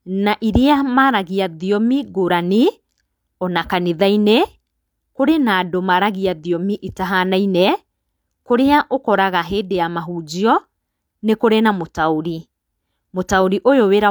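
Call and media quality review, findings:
No faults found in the audio.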